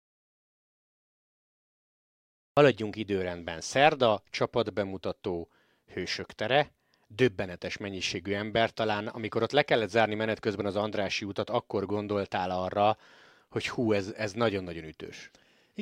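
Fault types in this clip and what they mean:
Audio dropout to silence: the speech opens on dead silence with no room tone until 2.57 s, likely from lost input while recording continued.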